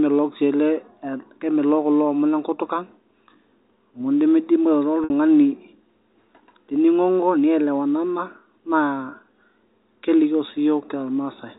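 At 5.04 s, packet loss with pitch repetition interrupts the speech for about 60 ms, until 5.10 s, a gap that fits three 20 ms packets going missing. The receiver bridged it by replaying the last pitch period over and over while fading it down across roughly 50 ms. The result is a brief, held, buzzy tone that thins out almost to silence before the speech cross-fades back in. Around it, the G.711 telephone coding keeps everything below 4 kHz.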